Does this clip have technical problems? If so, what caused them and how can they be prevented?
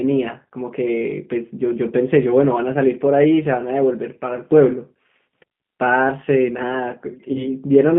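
Yes. Throughout the clip the speech has passed through a G.729 codec, which rebuilds each 10 ms frame from a vocal tract filter, a pitch predictor and a handful of pulses. The sound is confined to roughly 150 Hz to 3.5 kHz, with nothing above that, and the codec damage is plainly audible as a rough, slightly synthetic quality, which fits an 8 kbit/s G.729A stream. A wideband codec such as G.722 or Opus at a higher bitrate would avoid this.

From 7.33 to 7.49 s there is VoIP packet loss concealed by the speech codec. About 20 ms of audio, consistent with a single lost packet, never arrived, so the decoder extended its last pitch and filter state with falling gain. That fills the gap with a stretched sound that fades, and because each frame builds on the one before, the speech stays weak or distorted until about 7.49 s, well after the missing stretch itself. A cleaner network path with proper packet prioritisation, backed by a jitter buffer or forward error correction, would prevent it.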